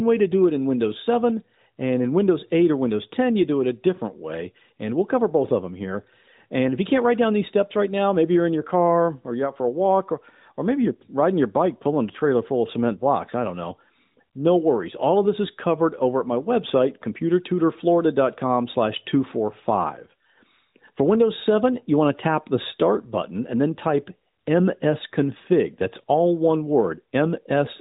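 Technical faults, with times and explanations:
No technical faults can be heard anywhere in this speech.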